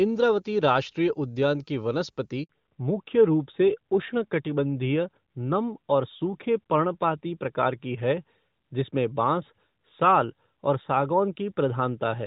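At 2.43 s a handover gap cuts the speech for 60 ms, ending at 2.49 s. While the call switched networks, no speech frames arrived, so the voice fades within a few tens of milliseconds into silence. On the waveform this shows as a flat stretch, and on the spectrogram as a blank vertical stripe.

From 2.49 s to the end, a fallback to narrowband takes hold. Before the gap, the clear, wide-range sound points to HD Voice. Afterwards everything above 4 kHz is gone, which fits a narrowband AMR codec, and the speech turns duller and rougher. The spectrogram shows a hard, flat ceiling at 4 kHz.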